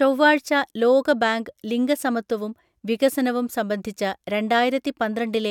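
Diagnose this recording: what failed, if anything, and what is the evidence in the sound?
Nothing in the speech signal points to a failure at any stage, with no audible dropouts, level jumps, distortion or timing disturbances anywhere in the recording.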